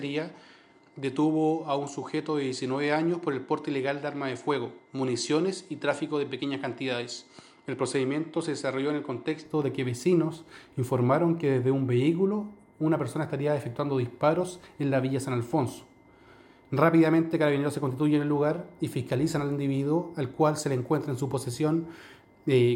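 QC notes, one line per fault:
0.0–9.45 s, input switched to a poorer device: band stops near 10.1 kHz, level a few dB lower, faint extra noise; clears gaplessly, likely a different microphone.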